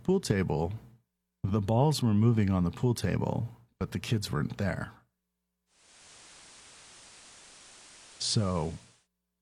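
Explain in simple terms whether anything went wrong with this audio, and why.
Around 5.66 seconds, the radio lost its digital signal and switched over to the FM analogue broadcast of the same station, a case of digital radio blending to analogue. It stays on FM until about 9.08 seconds. The changeover is a smooth cross-fade lasting about half a second. On the FM side, a layer of hiss sits under the speech, and the volume drops slightly.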